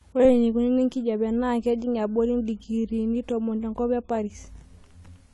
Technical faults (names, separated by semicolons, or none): AAC compression